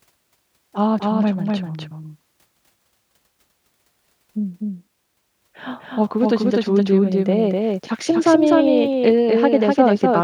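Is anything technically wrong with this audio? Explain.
Yes. A doubled audio track runs throughout the speech. A full-band copy trails the original by roughly 300 ms at about equal level, so each syllable repeats as a dry slap with no decay. The likely cause is a second capture through a slower path.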